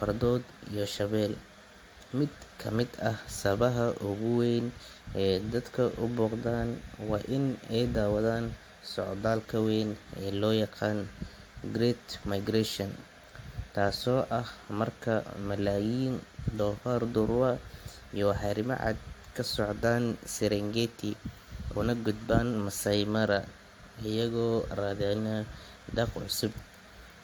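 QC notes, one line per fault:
Throughout, generation loss: the speech has a swirly, hollow, smeared quality, and consonant attacks sound soft, with nothing above 19.2 kHz. It's more washed-out than a single decent encode would give. It's likely the audio went through a lossy codec about four times over, with the sound pointing to AAC-LC at around 96 kbit/s. Each pass requantises on a shifted frame grid, so the noise and spectral holes keep piling up.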